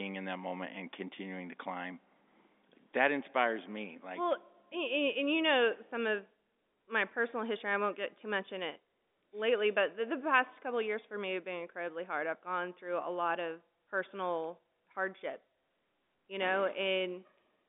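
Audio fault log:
No faults heard; telephone-band speech, nothing above 3.7 kHz.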